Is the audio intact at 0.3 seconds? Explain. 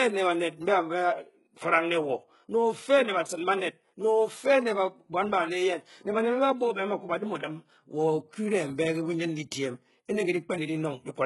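No. Across the whole clip the speech has heavy HE-AAC compression damage, likely from a very low bitrate near 12 kbps: the treble is copied up from lower bands, so s sounds turn gritty and metallic. Unlike a plain low-pass, the top stays bright, though nothing sits above 11.4 kHz.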